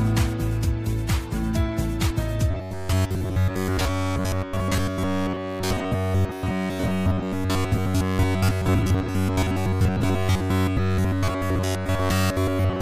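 A short burst of damaged data in a compressed stream sits at 2.09 to 2.11 s. There the decoder hits corrupted bytes, loses its place in the frame sequence and resyncs on the next valid header, producing a quick blip. On a spectrogram it would show as a thin vertical smear of broadband energy, and the waveform would have an abrupt discontinuity where the signal breaks off and resumes mid-cycle. From 2.51 s to the end, the audio takes on robotic sound from repeated short buffers: a rigid metallic buzz at about 94 Hz that still loosely tracks the underlying material. The likely cause is fresh audio arriving too slowly, so the playback path keeps looping its last fragment, roughly 10.7 ms long, while most of the real signal is skipped. A spectrogram would show evenly spaced horizontal harmonic lines at multiples of about 94 Hz imposed across the band, and a zoomed waveform would show the same short segment repeating back-to-back.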